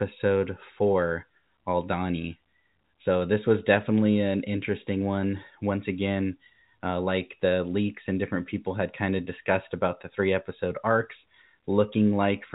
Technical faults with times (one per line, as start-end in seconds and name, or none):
none